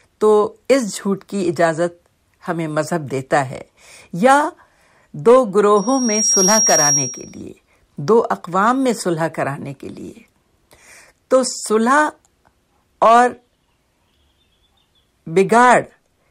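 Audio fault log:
5.76–7.43 s, loudspeaker feedback squeal: the microphone picked up its own loudspeaker, and around 5.6 kHz the loop gain went above one, so that tone fed on itself, swelling over about half a second into a piercing whistle roughly as loud as the speech.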